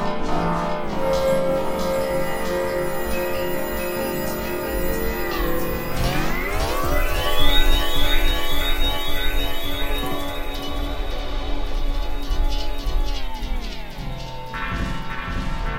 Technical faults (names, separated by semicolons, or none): USB whine